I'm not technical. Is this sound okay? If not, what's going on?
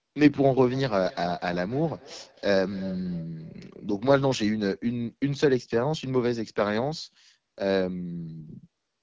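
No, there are two problems. The whole clip went through the AMR wideband (HD Voice) codec, the format phone networks use for clearer calls, but here it ran at one of its lowest settings. That squeezes the speech hard, so it sounds rough and raspy throughout.

From 0.59 to 4.5 s there's also a feedback echo between two devices: two phones or laptops in the same room on one call, each picking up the other's speaker. Every bit of speech comes back faintly about a third of a second later, thinner and more ringing.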